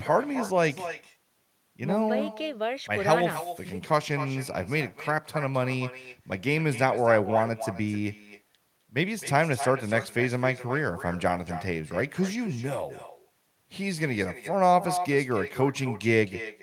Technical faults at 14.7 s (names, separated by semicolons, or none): echo with no canceller